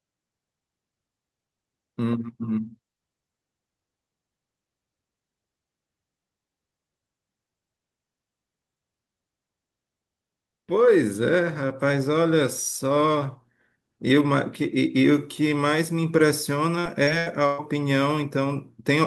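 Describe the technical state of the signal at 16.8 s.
At 16.8 s the speech is inside a stretch of repeated packet loss (robotic sound) running from 16.79 s to 17.61 s. Four separate holes occur in under a second, the longest 118 ms. The receiver patches each one by stretching the last decoded sound forward, so roughly a third of that span is concealment rather than real signal. The result is choppy speech with short pieces missing between the patched segments.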